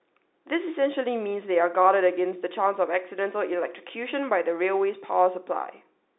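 No technical faults are audible.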